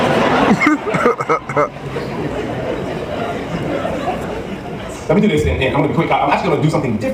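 At 5.00 s the pace jumps and stays faster through to the end at 7.14 s: a time-stretched section, squeezed to roughly 1.39 times normal speed while the pitch holds steady. The sound turns rushed, most likely because software dropped short slices to shorten this stretch. On a spectrogram the harmonic spacing stays unchanged, but events crowd together and show small seams, and the waveform's envelopes compress abruptly from 5.00 s onward.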